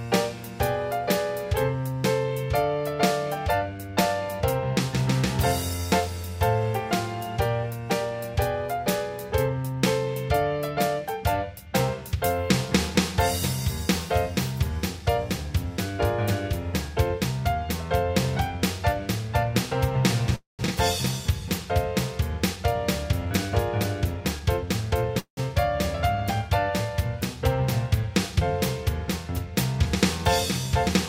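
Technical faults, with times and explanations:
20.35–20.62 s, call audio freeze: the sound stops and is carried on by a fading buzz for roughly the first part of the gap, then about 160 ms of silence, before resuming where it left off. Nothing is lost; the stall inserts about 234 ms of extra delay. The likely cause is packets held up in transit so the jitter buffer ran dry and the receiver had to fill the hole with a decaying continuation of the last sound.
20.67 s, skip ahead: just after the freeze, playback jumps forward with almost no gap, only about 4 ms of fill. Roughly 150 ms of audio is gone and the two sides are butted together. That stretch was dropped, either on the way or by an overflowing jitter buffer, and dropping it recovered most of the delay the freeze had added.
24.20–24.82 s, jitter buffer speed-up: for about 0.6 s the sound runs roughly 6% fast at unchanged pitch, giving a slightly hurried feel. 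The receiver trimmed short pitch-period-length pieces repeatedly, about 50 ms in total, to bring an overfull buffer back toward its target delay without an audible jump.
25.19–25.40 s, call audio freeze: a second stall, with the last sound continued as a fading buzz and then about 90 ms of silence, before the audio picks up exactly where it stopped. No audio is missing, but about 176 ms of delay is inserted. Likely the same underrun, with packets arriving late and the buffer emptying until they caught up.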